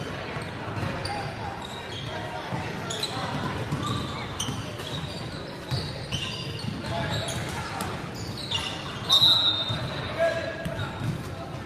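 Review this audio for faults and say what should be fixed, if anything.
Nothing here needs fixing, as the audio runs without any fault worth flagging.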